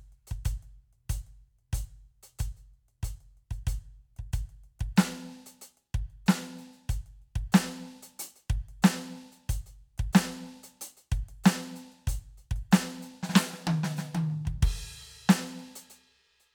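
Nothing goes wrong anywhere in this bit of music, so there's no technical fault to point to at any moment.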